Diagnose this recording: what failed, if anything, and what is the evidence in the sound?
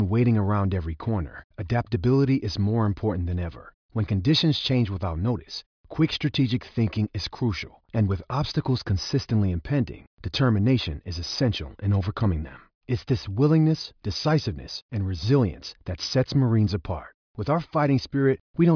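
Nothing failed in this speech recording; the sound gives no evidence of any fault.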